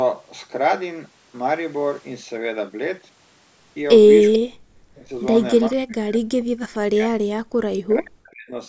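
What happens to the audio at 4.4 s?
Around 4.33 s the far end's echo canceller most likely failed to cancel everything its loudspeaker fed back into its microphone, so an echo leak slips through until 4.39 s. It is a brief, delayed copy of the sound arriving about 443 ms after the original, roughly 10 dB below the main level. It sounds like a faint ghost of what was said a moment earlier, too short to be more than a flicker.

Overlapping that, from 4.38 to 5.1 s, both ends appear to be talking at once, and the echo canceller likely could not tell the local talker apart from the returning echo, so it clamped down on everything. This is speech suppressed in double talk. Over roughly 0.7 s the level drops by as much as around 40 dB, and the sound dips.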